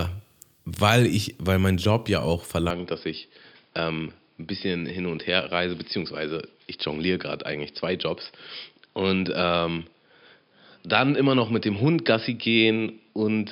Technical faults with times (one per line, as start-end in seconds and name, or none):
2.70-13.51 input switched to a poorer device